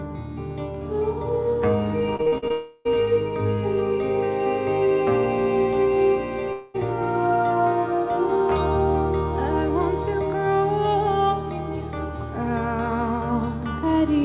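From 2.16 to 2.52 s the audio turns choppy and robotic as short pieces keep disappearing. This is repeated packet loss (robotic sound): five gaps, the longest about 42 ms, each patched by extending the preceding sound, so concealment fills about 44% of that stretch. Immediately afterwards, from 2.52 to 2.95 s, the sound smears into a sustained, synthetic-sounding continuation lasting about a third of a second, with no true silence, before normal audio resumes slightly late. A second, shorter smear runs from 6.53 to 6.76 s, about 0.22 s long. Both are likely long network dropouts, where nothing arrived and the receiver stretched the last sound across the hole, so that part of the original audio is simply gone. Throughout, the narrowband call codec, which fits G.711 A-law, leaves nothing above 4 kHz.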